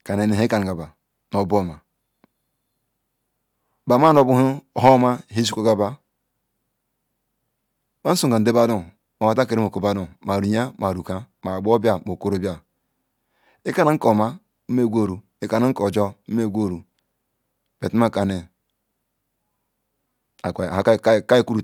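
A speech recording with nothing technically wrong with it.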